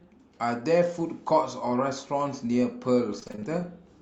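From 3.19 to 3.44 s the call suffered repeated packet loss. A rapid run of brief gaps, the longest about 21 ms, was each patched by extending the last received sound, so roughly half that stretch is concealment. The speech turns choppy, with pieces missing.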